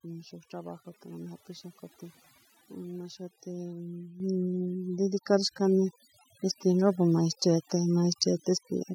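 Overdone noise removal runs through the whole speech clip. The noise reduction is set so aggressively that frequency bands sitting near its noise estimate are pulled far down or switched off, taking the quieter parts of the voice with them. The background collapses to near silence dotted with twinkling, chirpy specks. Unlike a simple low-pass or band-limiting fault, the damage shifts moment to moment, band by band, rather than removing one fixed range.

At 4.2 s the microphone volume is stepped up by about 8 dB, and at 5.22 s it rises again by about 4 dB. Each time the input level changes in one jump, and voice and residual background rise together and stay up. That sets it apart from a compressor or automatic gain pumping, which glides in and out. A plain loudness jump that then holds marks a single device-level volume change, not a dynamic process.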